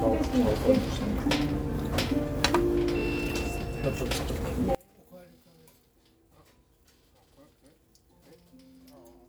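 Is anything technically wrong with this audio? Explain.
Yes. From 4.75 s to the end, the sound drops by about 31 dB and turns faint. One channel inverted is the likely cause. Its reversed polarity cancels everything shared between channels in mono.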